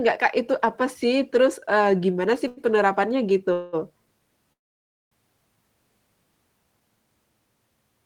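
At 2.47 s the speech holds one sound slightly too long, for about 94 ms until 2.60 s, with a faint buzz or dip. This is a short stall from a late packet: the jitter buffer ran dry, so the last sound was stretched and the speech resumed without loss.

At 3.53 to 3.76 s, and again from 4.53 to 5.14 s, the speech freezes into a fading buzz or hiss. The first lasts about 199 ms. The second decays into roughly 570 ms of silence within its 588 ms. These are call audio freezes, likely from packets delayed in transit emptying the jitter buffer. Each time the speech picks up where it stopped, so nothing is lost but the delay grows.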